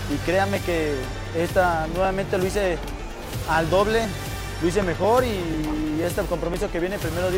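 A regular ticking runs through the audio, a small click roughly every half second from 0.06 s to 7.04 s, about fifteen in all, heard only where there is signal. These are periodic USB or driver dropouts: something stalls the USB bus or audio driver at a fixed 0.499 s interval, and about a millisecond of audio is skipped each time, so the waveform jumps and clicks where the missing slice was cut out.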